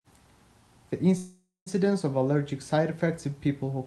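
A call audio freeze runs from 1.17 to 1.68 s in this speech. The speech stops and the last sound is stretched into a fading buzz for roughly half a second, ending in about 210 ms of silence, before the speech resumes exactly where it stopped with nothing skipped. This is likely a burst of delayed packets that drained the jitter buffer, so the receiver filled the wait with concealment. The 490 ms pause it inserted becomes a lasting added delay. The call codec limits the band to about 12 kHz throughout.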